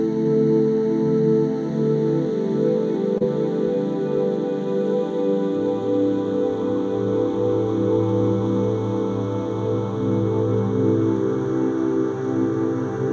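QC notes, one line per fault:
3.18–3.22 s, short concealed packet loss: 20 ms of audio missed the decoder's deadline, so the receiver extended the preceding sound for 24 ms and blended back into real audio, leaving a brief smeared wobble where the gap was patched over.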